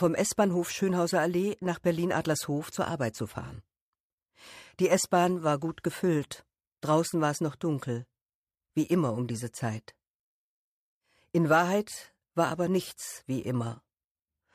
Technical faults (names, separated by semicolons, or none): none